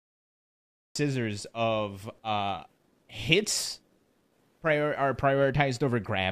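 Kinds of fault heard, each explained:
Cut-off start: The clip holds dead digital silence for just under a second, then the speech appears abruptly at about 0.96 s, already partway through a sound, with no natural onset or gradual rise in level. The sound lands at full strength instead of building from its attack. This happens when capture or streaming begins late: whatever was spoken before the recording engaged is simply missing, so the first audible moment is the middle of an utterance.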